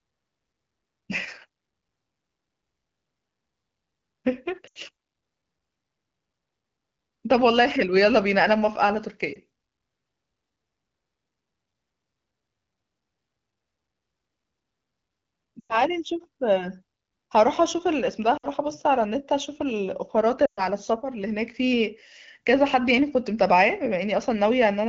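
Lost AMR speech frames show up at 4.67–4.78, 9.33–9.38, 15.60–15.82, 18.37–18.47 and 20.46–20.67 s. Corrupted frames got concealed by stretching the last good speech, so you hear a brief warble, or on the longer gaps (sounds like five or six frames) a quick drop to near silence before the voice returns a bit weak.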